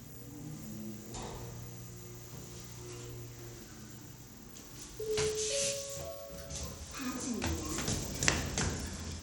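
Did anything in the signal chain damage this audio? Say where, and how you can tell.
Yes. Bluetooth SBC compression damage runs through the whole clip, at the codec stage. The treble is thin and unstable, flickering in and out, and a gritty, grainy noise with aliasing clings to the sound. This is likely the SBC codec with a small bit pool, which fits a rate around 96 kbps: it splits the signal into a few wide sub-bands without a hearing model, starves the weak upper bands of bits, and coarsely quantises the rest.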